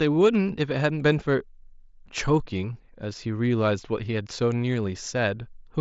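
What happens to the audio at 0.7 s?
Nothing goes wrong at 0.7 s: the speech carries straight through, heard over the wideband Bluetooth mSBC headset link, with no dropout, click or distortion at that point.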